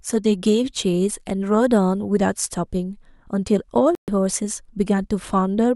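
At 3.95 s the speech drops to silence and comes back at 4.08 s, leaving a clean hole of about 128 ms with no noise or smearing across the gap. This is a digital broadcast dropout: the receiver stopped getting usable data, or the frames arriving failed their error check, so it muted its output until valid frames resumed. The length of the gap fits roughly four lost frames, and whatever was transmitted during that stretch is simply gone.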